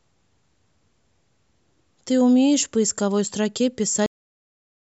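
Right at 4.06 s the speech just stops dead, a cut-off end. The recording quits in the middle of a sound instead of letting it finish, and what's left of the clip after that point is flat digital silence with no tail or decay at all. It sounds like the final chunk of audio never got written out or played back, so the last buffers are simply missing and the sound is chopped off rather than trailing away naturally.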